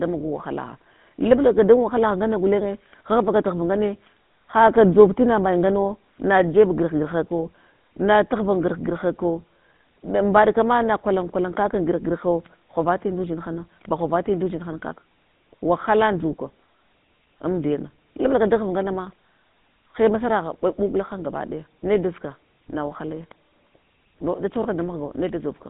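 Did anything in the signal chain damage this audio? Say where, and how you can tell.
Yes, the codec stage: the GSM full-rate codec damages the sound throughout, with nothing above 3.8 kHz and a 150 Hz to 3.7 kHz line band. The regularly spaced pulse excitation adds a buzzy, gravelly roughness that plain narrowband filtering wouldn't, which fits a 13 kbit/s GSM encode.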